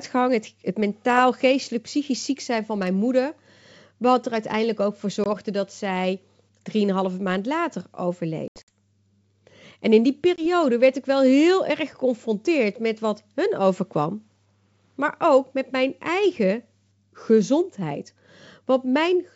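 Packet loss on an ADPCM call punches hard-edged silent holes at 5.24–5.27 s, 8.48–8.76 s (scattered gaps, longest 80 ms) and 10.36–10.45 s. Waveform flatlines, spectrogram shows blank vertical stripes, then brief distortion while the decoder's predictor and step size resynchronise.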